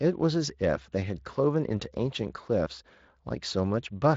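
No technical fault is audible in the speech; the only coloration is the light texture of Speex coding, at a setting that sounds fairly high, roughly 24 kbps, with the band ending near 7.6 kHz.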